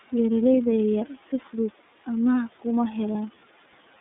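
From the start the speech carries the iLBC codec's narrowband sound: the passband runs only from about 200 Hz to 3.7 kHz, so a spectrogram shows a flat ceiling with nothing above it, and the low fundamental region is thinned. The excitation is coded frame by frame at a rate that points to the 13.33 kbps mode with 30 ms frames, leaving a plainly audible rough, slightly synthetic edge, with faint room noise about 23 dB down in the gaps.

At 3.12 s, lasting to 3.16 s, a gap of 30 ms, consistent with one lost iLBC frame, is filled by the decoder repeating the last pitch cycle blended with noise. It is heard as a brief held, buzzy, breathy vowel sound. On the waveform, a short stretch of near-identical repeating periods appears with a slightly fuzzier envelope. On the spectrogram, the harmonics run flat for that instant. Because each frame decodes independently, normal speech resumes immediately afterward.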